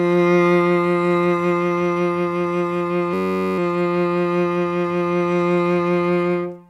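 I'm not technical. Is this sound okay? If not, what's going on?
No. Around 3.14 s the computer or its audio driver briefly froze, but the sound hardware kept replaying the same tiny slice of its memory. This is a system hang loop. A piece of music about 10.7 ms long, which fits a 512-sample buffer, repeats 42 times until 3.58 s. Because the piece is so short, it comes out as a steady, low buzz at about 94 Hz rather than a stutter. The music then resumes with essentially nothing missing.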